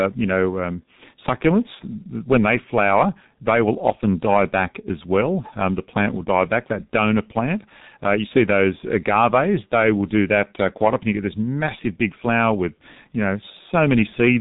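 Speech coded with the G.723.1 codec throughout: muffled, hoarse and smeared, consistent with roughly 6.3 kbit/s; a spectrogram shows nothing above 3.8 kHz and blurred consonants.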